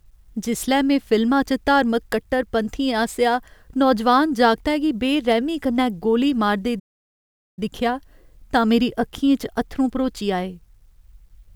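A speech clip with a playback stall: right after "बेरैह्मी कन्नै गोली मारदे" the sound cuts off at 6.79 s and stays silent until 7.59 s, about 0.78 s. That likely means the player starved for data. On a waveform this is a flat gap; a spectrogram shows a blank vertical band.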